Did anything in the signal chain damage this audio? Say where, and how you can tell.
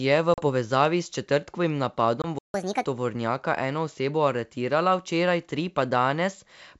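Yes. Network stage: packet loss on an ADPCM call at 0.34–0.43 s and 2.22–2.27 s. These are hard silent gaps of 40 ms and 20 ms. The first gap falls before "povezavi s četrtkovim" and the second after "v povezavi s četrtkovim". The adaptive decoder then restarts out of step, so speech returns slightly distorted until it settles.

Playback stage: a playback stall from 2.39 to 2.54 s. The sound stops mid-flow for about 150 ms, likely a buffer underrun in the player.

Playback stage: catch-up at higher speed from 2.54 to 2.85 s, just before "tovornjaka eno osebo aretirala". Audio runs at 1.5 times speed, pitch up about seven semitones, recovering lost time.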